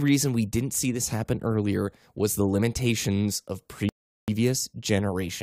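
At 3.89 s, right after "was the limitations of", the speech drops into silence for 390 ms and picks up again at 4.28 s. This is a rebuffering stall: playback consumed everything that had been downloaded and had to wait for more data before continuing. The sentence resumes at exactly the point where it broke off, with no audio skipped, so the only damage is an unnatural gap inserted mid-phrase that stretches the delivery.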